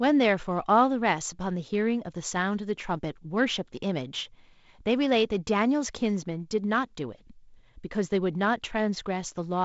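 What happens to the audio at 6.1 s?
At 6.1 s the speech is intact, carried by the G.722 wideband telephone coding with its bandwidth reaching up to about 7.7 kHz.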